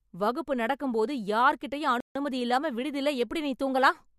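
At 2.00 s, right after "வகுப்பு நடக்கும் போது யார்கிட்டயும்", the speech halts in a rebuffering stall: playback ran dry of downloaded audio and waited for more, so 150 ms of silence is inserted before the sentence picks up exactly where it broke off. Nothing is skipped, but the pause sounds abrupt. On a waveform it appears as a flat gap from 2.00 to 2.15 s; a spectrogram shows a clean vertical blank band across all frequencies.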